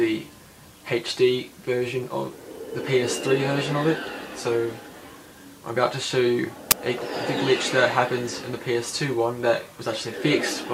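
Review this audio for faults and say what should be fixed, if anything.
Uninitialised buffer at 6.71 s: an 11 ms stretch of leftover memory played as samples, fitting a 512-sample buffer. It shows as a thin vertical spectrogram stripe and an abrupt waveform block. Zero-fill every buffer, or wait until it has been written, before handing it to playback.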